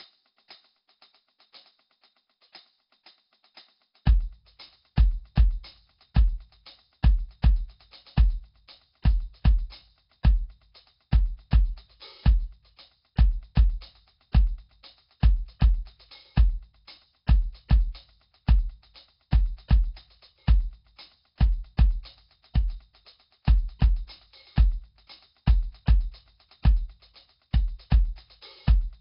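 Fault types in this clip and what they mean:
Nellymoser compression: The music sounds rough and hissy, with a smeared, underwater blur, and nothing is present above about 5.3 kHz. This likely comes from the Nellymoser Asao codec used for Flash audio, which codes short blocks with a fixed, small bit budget. Bands it cannot afford are left empty and refilled with noise, and the damage here is heavy, fitting a rate near 22 kbps. A simple low-pass filter would dull the top without this noisy, smeared texture.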